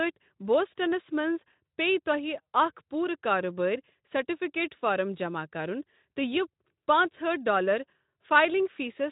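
No technical faults can be heard; the speech passes through a Speex path at 15 kbps, with nothing above 3.8 kHz.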